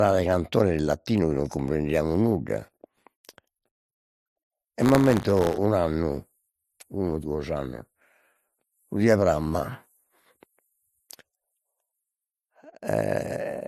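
It's a speech recording, and the whole thing is dull on top, with nothing above 13.9 kHz and a mix of different compression artefacts heard together. That's likely transcoding between lossy codecs, with the sound pointing to an MP3 pass at a low bitrate, then AAC-LC on top, each stacking its own artefacts. From 4.78 to 5.58 s there's buffer tearing: a rattly 100 Hz buzz, which fits a 10 ms buffer period, where a small sliver of each period is replaced by audio from roughly 30 ms earlier with hard joins.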